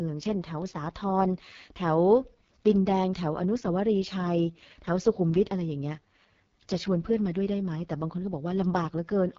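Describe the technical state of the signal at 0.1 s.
The speech at 0.1 s, as throughout the clip, has gone through the AMR wideband (HD Voice) codec at a low rate consistent with 6.6 kbit/s. The modelled band ends at 6.4 kHz with noise above, so the sound is heavily rough and raspy, with nothing above 7.3 kHz.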